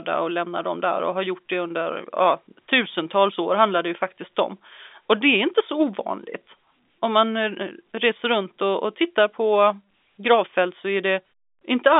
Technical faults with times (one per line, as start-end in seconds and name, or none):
none